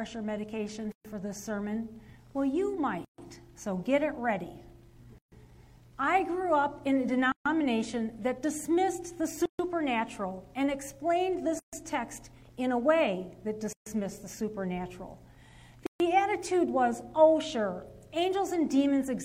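A gap at a join of encoded pieces recurs at 0.92, 3.05, 5.18, 7.32, 9.46, 11.59, 13.73 and 15.86 s: separately encoded 2 s segments were joined with their padding left in, so the sound stops for about 127 ms, then 136 ms, and resumes. Spectrograms show blank vertical strips; waveforms show flat gaps.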